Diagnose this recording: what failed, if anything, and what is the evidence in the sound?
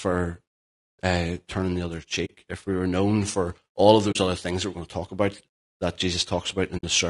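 Low-delay AAC compression, throughout (codec stage): the speech is rough and grainy, with noise between the harmonics, likely from AAC-ELD's short frames at around 32 kbps.

AAC frame loss with muting (network stage) at 2.25 s after "uh turning the other", at 4.11 s after "known for all of", and at 6.77 s. The decoder zeroed the missing frames, leaving soft-faded holes of about 50, 50 and 70 ms.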